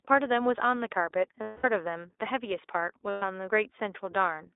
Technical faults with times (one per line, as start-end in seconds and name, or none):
0.00-4.55 iLBC codec
1.42-1.66 lost iLBC frames
3.10-3.23 lost iLBC frames